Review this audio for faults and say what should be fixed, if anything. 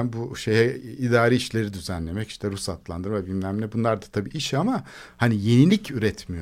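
Mains buzz enters at 5.09 s, right after "da tabii iş ama", and continues to the end of the speech clip. It is a raspy 60 Hz buzz, roughly 35 dB below the speech, caused by sharp switching spikes twice per mains cycle that spread harmonics into the kilohertz range. That upper-harmonic rasp sets it apart from plain hum, which stays a smooth, low tone. Prevent it with shielded, grounded cabling kept away from dimmers and rectifiers.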